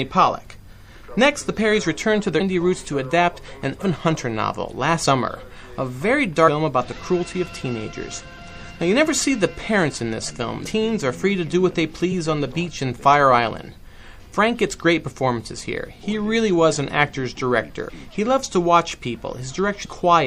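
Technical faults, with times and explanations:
Throughout: MP3 compression. The sound has a plainly audible watery, swirling quality, with the treble cut short and faint high detail flickering in and out from moment to moment. This is likely from MP3 encoding at a low rate, consistent with about 64 kbps. With so few bits, the encoder drops the top of the spectrum at a fixed cut-off and zeroes weaker frequency lines, which then switch on and off between frames.
2.39, 3.80, 5.03, 6.47, 10.65 and 19.84 s: compressed frames skipped. At each point the audio jumps forward, losing roughly 70 ms, 100 ms, 150 ms, 200 ms, 150 ms and 200 ms respectively. Each gap matches a whole number of frames, which fits a frame length of about 26 ms. Whole compressed frames were not played. Because adjacent frames overlap, each join comes out as a brief smeared blip rather than a sharp click.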